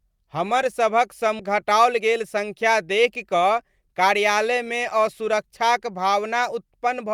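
At 1.39 to 1.41 s, just after "हमर सभक", the speech skips ahead. Roughly 0.4 s of audio was discarded while later packets were already queued, and playback resumes with no gap, so the sides of the cut are abruptly joined.

From 1.49 to 4.53 s a jitter buffer speed-up follows. The receiver trims short pitch-period segments repeatedly to drain excess buffered audio, about 0.2 s in total. The speech runs at about 107% speed with unchanged pitch, sounding hurried.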